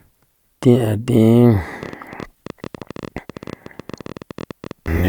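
From 1.83 s to 4.87 s a train of clicks runs over the speech: some fifty near-identical pops at about 14.5 per second, unevenly spaced, peaking roughly as loud as the voice, likely interference from nearby equipment. Their matching shape and persistence through pauses distinguish them from random crackle.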